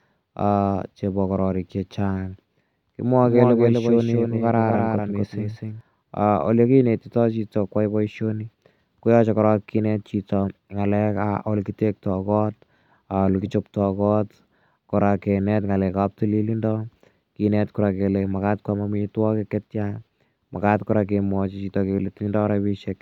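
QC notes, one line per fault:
3.23–5.81 s doubled audio track: speech repeats about 300 ms late, roughly 5 dB down, dry with abrupt edges, likely from a slower second capture path.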